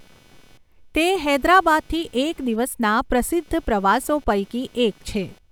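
Throughout the speech runs computer activity noise: a buzzy, chirping whine pulsing around 300 Hz, some 35 dB below the voice, tracking the machine's load rather than the talking. Processor and graphics activity disturb the shared ground. A spectrogram shows faint comb-like harmonic striations continuing between phrases.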